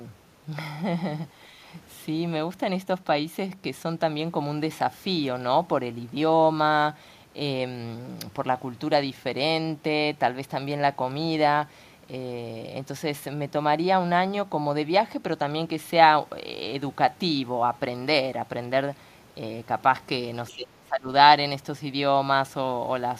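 At 20.48 to 20.53 s, a brief scrap of the other side's voice leaking through appears, very faint, roughly 30 dB under the speech. It is likely residual loudspeaker echo the echo canceller missed. On a spectrogram it shows as a thin, separate smear of harmonics.

From 20.5 to 21.08 s the speech is suppressed in double talk, likely because the canceller could not separate this talker from the echo and attenuated both. The voice dips by around 20 dB for about half a second. The waveform envelope visibly caves in there.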